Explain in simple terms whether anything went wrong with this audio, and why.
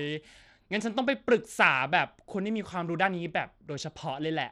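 Gritty, smeared treble runs through the whole speech clip, with high frequencies flickering in and out, likely from Bluetooth SBC compression starving the top bands of bits.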